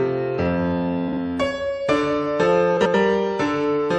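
A four-second piece of audio with two spots where frames come out of order: around 1.08 to 1.17 s and again at 2.77 to 2.95 s. In each, two neighbouring chunks swap places, 42.7 ms and then 85.3 ms long, so a brief garbled flutter plays. Nothing goes missing, since the stretch is just reshuffled, and the block sizes fit runs of about 21 ms codec frames.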